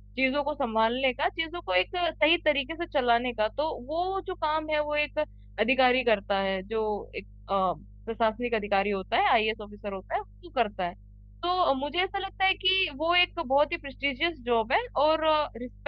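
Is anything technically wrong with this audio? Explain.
Yes. A ground loop or nearby transformer is leaking the power line into the signal, producing mains hum at 50 Hz for the whole clip. It sits about 20 dB below the speech as a steady low drone, with some low harmonics above the fundamental.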